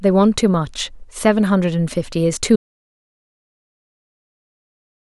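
At 2.56 s the input was likely lost, through a disconnected device or failed link, while the recording carried on writing silence: an audio dropout to silence. The speech cuts off mid-flow and gives way to silence, with no room tone, to the end.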